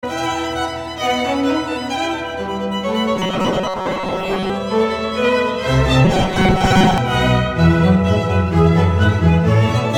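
From 3.16 to 4.50 s and again from 6.05 to 6.98 s, the music takes on a robotic sound from repeated short buffers: a rigid metallic buzz fixed at 188 Hz. It is likely caused by about half the audio being replaced with repeats of a slice roughly 5.3 ms long. Unlike a dropout, the sound never goes silent, and the buzz holds a constant pitch.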